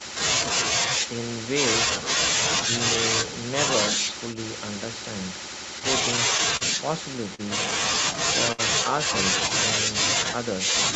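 A call recording of speech, passed through a call codec with nothing above 8 kHz, with jitter-buffer stalls. Between 5.79 and 6.63 s packets arrived late repeatedly, causing repeated stalls (stutter): the buffer emptied four times and the receiver extended the last sound, about 73 ms in total with the longest gap 41 ms, so the speech drags and catches. Two further short stalls from a late packet follow, at 7.35 s and 8.52 s, where a late packet left the buffer empty and the last sound was held for 41 ms and 60 ms, giving a brief drawn-out sound with a slight buzz or dip before it resumes.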